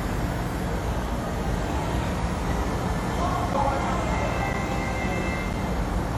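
Throughout, the audio shows the signs of a low-bitrate transform codec, likely WMA compression at around 48 kbps: coarse quantisation smears noise in time, giving a ringing, washy texture and hiss that swells with the sound, with nothing above 18 kHz.

From 3.53 to 5.54 s, periodic USB or driver dropouts occur once per second: something stalls the audio path at a fixed interval, and roughly 10 ms of sound is replaced by silence each time, heard as about three evenly spaced ticks.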